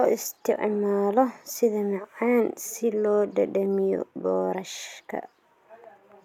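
No technical faults can be heard in this speech recording. There are no events to place in time.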